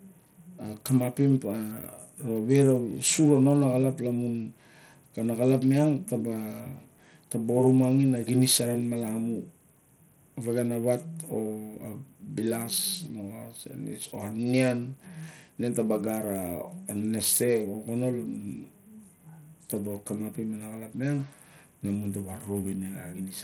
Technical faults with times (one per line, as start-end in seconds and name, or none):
0.00-23.43 Bluetooth SBC compression